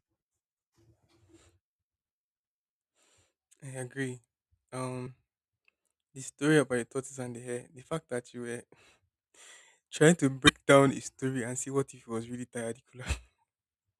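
A speech clip with two short hits of damaged data in the compressed stream, at 5.03 to 5.07 s and again at 10.45 to 10.50 s, right after "trying to" and just before "down a story and". Each lasts about 40 ms. Bad bytes in the stream there mean the decoder misreads those frames, loses sync and has to hunt for the next valid frame header before playback settles.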